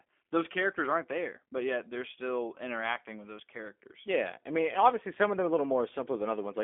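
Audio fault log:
Throughout, G.729 codec: speech is rebuilt from a vocal tract model and sparse pulses, sounding rough and synthetic, with nothing above 3.5 kHz, fitting an 8 kbit/s line.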